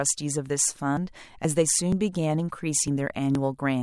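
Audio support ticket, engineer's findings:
Audio missing between chunks: brief skips in speech at 0.50, 0.97, 1.45, 1.92, 2.40, 2.88, 3.35 s, each losing about 20 ms. Likely 0.5 s chunk handoff. Waveform shows abrupt splices; spectrogram shows regularly spaced vertical discontinuities.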